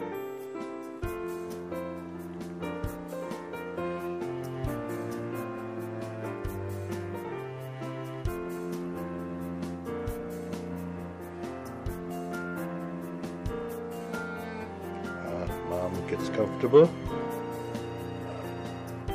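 No technical faults can be heard anywhere in this recording.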